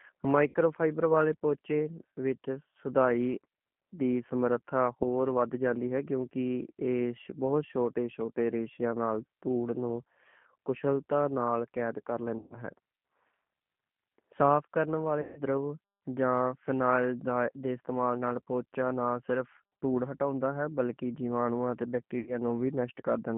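Throughout, the G.729 codec (G.729A at 8 kbit/s) plainly roughens the speech. It rebuilds each 10 ms frame from a vocal-tract filter, pitch predictor and a few pulses, so the voice sounds slightly synthetic and band-limited to roughly 150 Hz–3.4 kHz. That grainy, model-based texture sets it apart from simple low-pass filtering.

VoIP packet loss concealed by the speech codec occurs at 0.48–0.56 s (about 60 ms lost), 12.39–12.56 s (120 ms), 15.21–15.40 s (150 ms) and 22.20–22.38 s (60 ms). The decoder stretches its last pitch and filter into a buzzy tone or coloured noise that fades, and the voice recovers slowly rather than dropping to hard silence or clicking as a plain dropout would.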